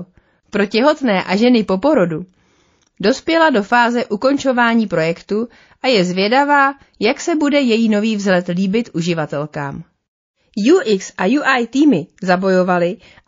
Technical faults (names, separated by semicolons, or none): MP3 compression